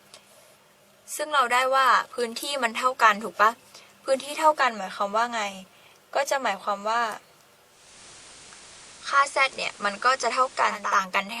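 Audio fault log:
7.64–11.02 s, digital radio blending to analogue: the receiver lost the digital stream and cross-faded over about 0.41 s to the FM broadcast. Hiss rises to roughly 25 dB under the signal, and level shifts by about 1 dB.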